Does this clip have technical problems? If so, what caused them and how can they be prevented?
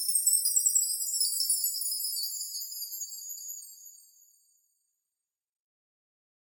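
Yes. Repeated frames cause a stutter at 0.59 to 0.78 s, where a block of about 96 ms plays two extra times, and at 3.38 to 3.57 s, where a 192 ms block plays once more. The block sizes fit runs of three and six compressed frames being written or sent again, so the decoder replays identical audio and each event adds 192 ms. Unlike a dropout, nothing goes missing: the sound repeats itself. Prevent it by checking frame sequence numbers or timestamps in the writer and transport so that duplicate frames are discarded before decoding.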